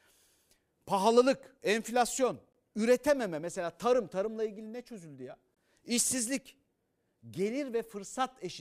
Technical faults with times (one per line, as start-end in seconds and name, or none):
2.53-2.55 gap between chunks
5.55-5.57 gap between chunks